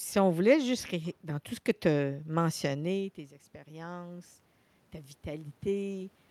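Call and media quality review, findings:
Automatic gain rising, 2.06 to 4.39 s, just after "tout ce que tu". Level at the mic drops about 16 dB around 2.5 s (talker moving off), and the AGC creeps its gain up by about 3 dB over a couple of seconds to compensate. Voice and room noise swell together, so the background bed lifts along with the talk. Component: capture-side AGC. Slow release, and it only claws back a small part of the drop.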